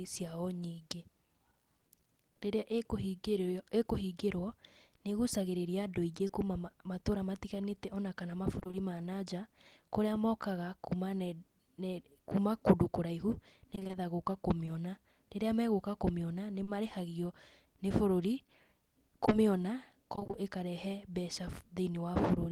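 It's a speech recording with dropouts from the network path. There's short concealed packet loss at 6.27 s, just before "kuuma matũra", then at 14.65 s, around 16.63 to 16.69 s, and as a back-to-back pair at 19.25 to 19.33 s. Each is a 20 to 40 ms hole the decoder papered over by stretching the previous sound, so you hear a quick smear or wobble. Then there's repeated packet loss giving that robotic sound at 8.59 to 8.75 s (right before "ma na nja kũrĩa"), 13.75 to 13.95 s and 20.15 to 20.35 s. About half of each stretch is concealed in 20 ms chunks, so the speech goes choppy, with bits missing.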